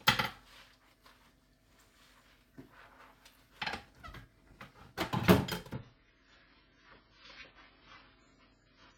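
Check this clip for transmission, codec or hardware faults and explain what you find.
One fault: from 5.74 s to the end, the adaptive stream switches to a lower bitrate. The adaptive player drops to a leaner encoding when throughput falls. Nothing remains above 7.5 kHz, and codec artefacts rise, which fits a jump from roughly 96 to 12 kbit/s AAC. Unlike a rebuffering stall, the change is abrupt but gapless.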